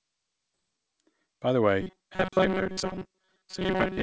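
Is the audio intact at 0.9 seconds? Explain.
No. A jitter buffer speed-up runs from 0.64 to 1.55 s. Repeated pitch-period cuts remove about a tenth of a second, so the speech sounds hurried at about 110% speed, with unchanged pitch.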